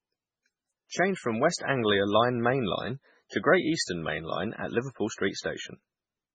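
Throughout the speech, the treble stops abruptly near 9 kHz and the remaining sound is watery and swirly, with weak detail flickering between frames. This is likely MP3 compression, and the heavy damage fits a very low bitrate around 16 kbps.

Pre-echo appears at 1.56 s, 3.83 s and 5.40 s. Each sharp attack is preceded by roughly 40 ms of short hiss, as the codec spreads block-wide quantisation noise into the quiet moment before the onset, leaving the attack softened.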